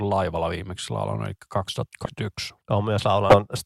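At 2.05 to 2.09 s and again at 3.29 to 3.38 s, the speech jumps ahead: compressed frames skipped. Roughly 200 ms and 150 ms of audio just vanish, which fits runs of missing 20 ms frames.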